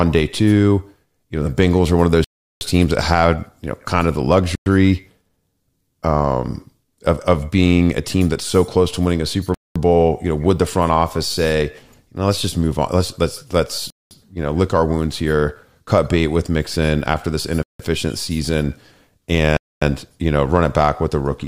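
The speech drops to dead silence six times: at 2.24 s for 0.37 s, at 4.55 s for 0.11 s, at 9.54 s for 0.21 s, at 13.90 s for 0.21 s, at 17.63 s for 0.17 s and at 19.57 s for 0.25 s, each gap ending abruptly as the sound returns. These are likely Bluetooth stalls, where radio interference delays packets, the headphones' buffer runs empty and playback halts until the retransmitted audio arrives.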